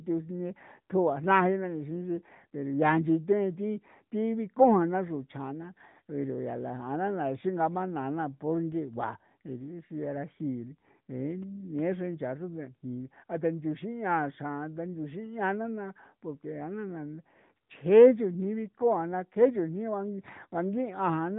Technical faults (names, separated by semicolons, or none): AMR narrowband mobile codec